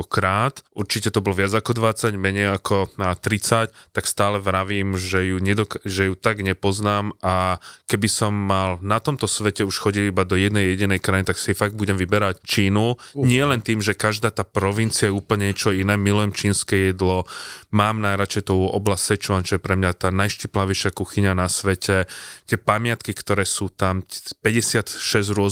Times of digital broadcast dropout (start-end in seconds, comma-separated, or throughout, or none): none